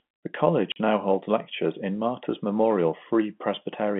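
A speech recording over a telephone-band line, roughly 150 Hz to 3.4 kHz, has packet loss filled with silence from 0.72 to 0.76 s, just before "now holds lectures in". The 40 ms gap, which fits four 10 ms packets, shows as a flat-line waveform and a blank vertical stripe on the spectrogram, with hard edges.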